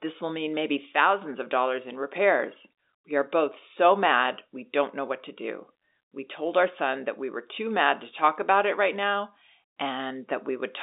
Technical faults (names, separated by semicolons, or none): none